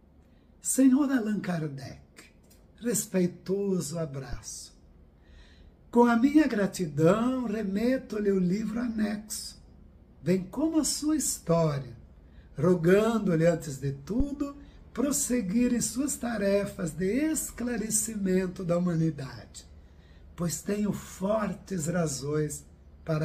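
At 4.33 to 4.39 s and again at 14.20 to 14.27 s there's a phantom power thump: a supply switching on a live input sends a step through the coupling capacitors. Each is a deep thud, peaking around -22 and -16 dBFS, dying away within 14 to 16 ms.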